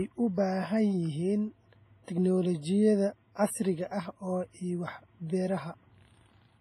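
A speech clip with heavy codec damage from start to finish. The sound rings and smears, and a hiss swells and fades with the speech. Nothing is present above about 15.2 kHz. This is likely WMA compression. Its transform blocks are long, so quantisation noise spreads over tens of milliseconds around each sound. Weak spectral lines are dropped. The depth of the damage fits an early WMA encoder at a low bitrate, around 24 kbps.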